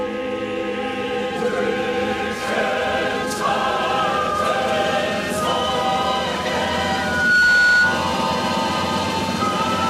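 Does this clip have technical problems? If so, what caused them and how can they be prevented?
Yes. Loudspeaker feedback squeal runs from 6.83 to 8.15 s: a steady 1.5 kHz tone swells over about half a second until it sits roughly 5 dB above the rest of the audio. The microphone was picking up the loudspeaker it was driving, and at 1.5 kHz the gain around that loop exceeded one, so the tone kept reinforcing itself. Prevent it by lowering the monitor gain, keeping the microphone out of the speaker's coverage, and notching 1.5 kHz.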